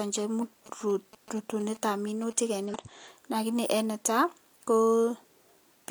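Right at 0.38 to 0.44 s there's a quick glitch from damaged data in the compressed stream. The decoder hit corrupted frames, lost sync and jumped to the next good header, and the same kind of glitch comes back at 2.65 to 2.74 s. Between those, from 0.66 to 2.55 s, you get GSM signalling bursts, a nearby 2G phone chatting with its network. The circuitry rectifies the radio pulses into that galloping dit-dit-dit of short 217 Hz buzzes, sitting roughly 20 dB under the speech.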